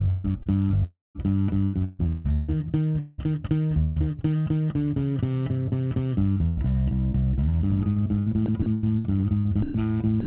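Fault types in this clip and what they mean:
Sound chopped by the voice detector: The sound repeatedly breaks up into patches of smooth synthetic hiss and then returns, most likely because the sender's voice detector kept switching transmission on and off. The sound breaks up from 0.08 to 3.98 s, briefly at 6.32 to 6.59 s, and again from 7.93 to 9.46 s. About 1.4 s, 0.13 s and 0.41 s of sound are replaced. Unlike a single dropout, the on-off switching repeats within each stretch.
Sound dropped by the voice detector: Twice near the end, the sound gives way once to steady comfort noise and then picks up again, likely because the detector judged quiet material to be background and stopped sending. This happens for 120 ms at 9.62 s and for 60 ms at 10.20 s. Each gap is a single clean substitution, not rapid flickering. The noise that fills it shares the clip's narrowband character, with nothing above 4 kHz.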